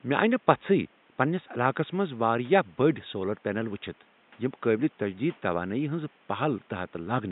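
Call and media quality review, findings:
No system faults found; room noise sits about 34 dB below the speech and is part of the recording.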